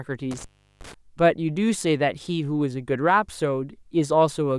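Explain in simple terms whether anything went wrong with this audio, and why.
Intermittent contact, between 0.31 and 0.94 s: a loose cable or plug briefly lost its connection, so the speech drops out for about 0.37 s, with crackle where the contact breaks and returns and faint hiss while the line is open.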